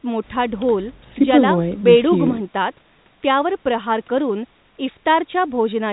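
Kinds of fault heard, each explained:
No faults are audible: the speech carries the lowest bass trimmed away by the call's microphone processing and is limited to the telephone band, with nothing above 3.9 kHz, as expected from G.711 A-law coding.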